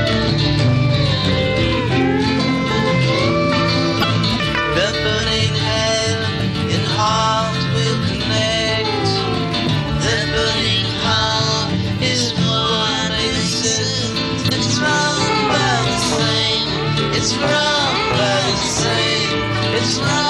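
At 3.99–4.04 s and again at 14.46–14.52 s, damaged data in a compressed stream produces a brief chirp, squawk, click or short hole of roughly 60 ms. Corrupted bytes make the decoder misread those frames and lose sync until it locks onto the next valid frame header.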